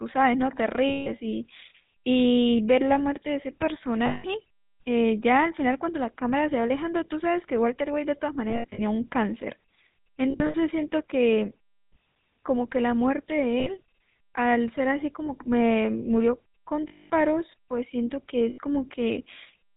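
Throughout the speech there is GSM full-rate codec damage, consistent with the 13 kbps GSM full-rate codec. The codec rebuilds the voice from a vocal-tract filter driven by a coarse pulse excitation, so the voices sound buzzy and gravelly and carry nothing above 4 kHz. The damage is plainly audible across the whole clip.

Lost GSM frames occur at 0.88–1.10 s, 4.06–4.26 s, 8.50–8.79 s, 10.30–10.55 s, 13.60–13.70 s, 15.26–15.30 s, 16.88–17.10 s and 18.50–18.59 s. The decoder fills each gap by repeating the last good frame, which holds the sound as a rough metallic ring. Missing audio ranges from 20 ms at 15.26 s to 220 ms at 16.88 s. At 8.50 s and 10.30 s the losses are scattered across about a quarter-second, in runs under a tenth of a second.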